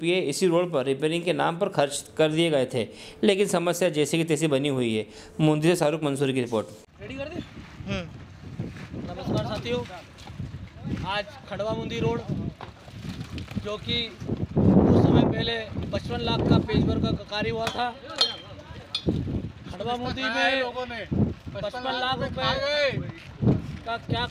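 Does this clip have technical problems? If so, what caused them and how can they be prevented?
No, nothing stood out as a technical problem on listening to this clip.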